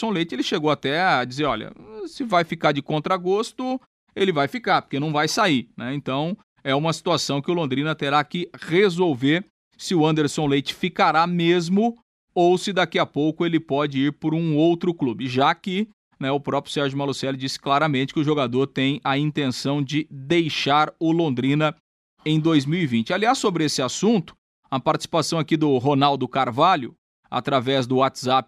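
No technical faults are audible.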